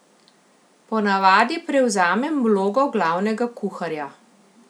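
A single sharp tick at 1.21 s, just before "prevzamem vlogo glavnega", is a bit error spike: a flipped bit briefly jolts three samples, peaking at about -31 dBFS.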